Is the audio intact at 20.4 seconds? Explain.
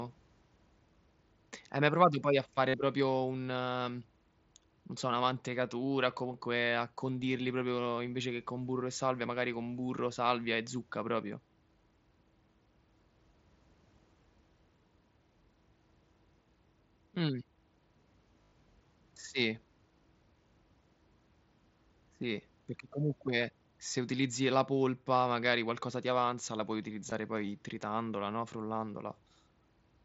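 Yes, the speech at 20.4 s is intact, with no dropout, click or other fault at that moment.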